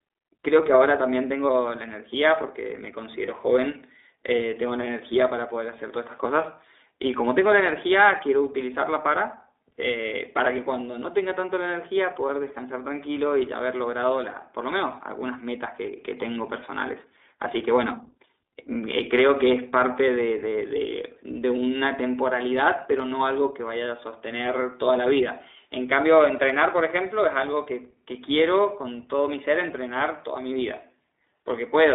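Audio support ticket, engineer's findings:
iLBC codec, throughout: narrowband speech, band-limited to roughly 300 Hz to 3.7 kHz, with plainly audible rough, synthetic texture. Spectrogram shows a hard ceiling near 3.7 kHz. Sound fits iLBC's 15.2 kbps mode with 20 ms frames, each coded independently.

Lost iLBC frames, 3.26 to 3.29 s: brief held, slightly buzzy fill where speech should continue, consistent with one dropped 20 ms frame. The decoder repeated the last pitch cycle mixed with noise. Waveform shows copied periodic cycles with no new onset, then normal speech resumes immediately.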